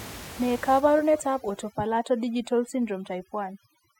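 From 0.8 s to the end of the speech, overdone noise removal takes hold. The noise reduction is set far too aggressively for room noise sitting about 19 dB below the speech, so individual frequency bands near the estimated noise floor are pulled almost to nothing. Low-level parts of the speech are removed along with the noise. The background drops and breaks up into scattered twinkling specks.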